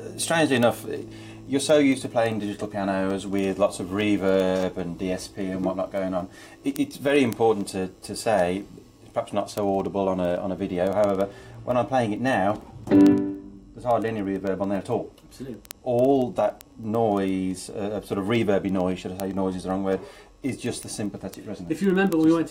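Word clock ticks run through the audio from 0.12 s to 22.46 s, arriving roughly every twentieth of a second. The receiver's unlocked clock drifts by something like 400 ppm, dropping or repeating one sample per slip. Unlike random clicks or buffer dropouts, these ticks keep an even rhythm while varying in strength.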